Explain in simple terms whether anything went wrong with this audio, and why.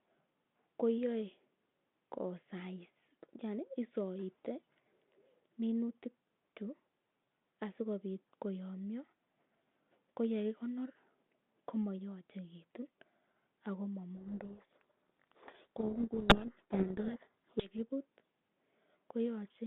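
A codec payload misread runs from 14.16 to 17.71 s. The phone system's G.726 coding packed each small code word's bits in one order, but the receiving end read them in the opposite order, so the speech there is buried under harsh distortion.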